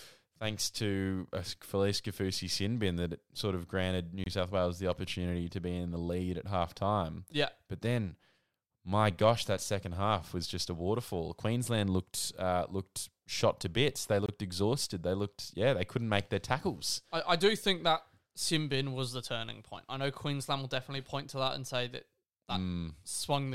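Right after "that sort of granted", at 4.24 to 4.26 s, the speech drops into a hard-edged hole about 23 ms long, and the same gap between chunks turns up again at 14.26 to 14.29 s. That 10-second spacing suggests each chunk starts late, leaving silence at the joins without losing any sound.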